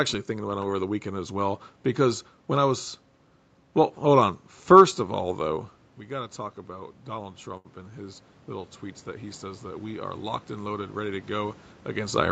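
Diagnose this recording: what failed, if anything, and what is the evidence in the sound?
The automatic gain is rising in the call processing. Around 5.5 s the talker seems to drift back from the mic, and the level drops by about 11 dB. From 5.98 s to 11.65 s the AGC slowly claws back about 7 dB. You can hear it because the voice and the room noise swell together. The gain stage can't tell them apart, so the whole bed lifts over several seconds rather than jumping.

At 7.57 s to 7.67 s there's a short stall from a late packet, somewhere between the network and the jitter buffer. A packet didn't turn up on time, the buffer ran dry, and the receiver stretched the last bit of sound for about 75 ms, which gives a held moment with a slight buzz or dip. Nothing is actually lost. Playback resumes right where it left off, just about 75 ms later than before.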